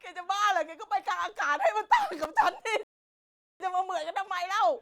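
A speech clip with two faults. At 2.23 to 2.26 s a brief loose connector crackle, a short irregular scratchy burst from a contact making and breaking, distinct from a clean digital click. From 2.83 to 3.60 s a rebuffering stall cuts the sound to silence for about 768 ms; unlike a dropout, speech resumes exactly where it stopped, with nothing lost.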